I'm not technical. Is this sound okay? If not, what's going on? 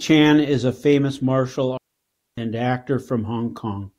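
No. From about 1.77 s to 2.38 s the speech cuts out completely for roughly 0.6 seconds. This is a digital wireless dropout: the wireless microphone link lost too much of its signal, so the receiver muted itself rather than play damaged audio. You hear a clean gap of near silence with no crackle or hiss on either side, and the sound returns once the link recovers.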